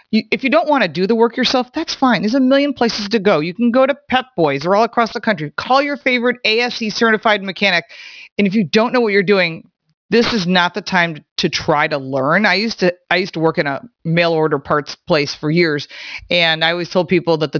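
The sample rate was cut without an anti-aliasing filter, which fits a drop from 44.1 kHz to 11 kHz. Content above 5.5 kHz folds back throughout as aliasing, about 20 dB below the speech, making sibilants gritty and metallic.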